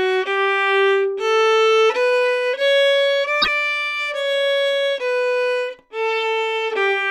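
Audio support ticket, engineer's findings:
Likely broken MP3 bit reservoir after frames were dropped from the stream. Decoder reads borrowed bits from the wrong frame. Audio skips ahead, then about 70 ms of garbled output, 3.41 to 3.48 s, roughly three 26.1 ms frames.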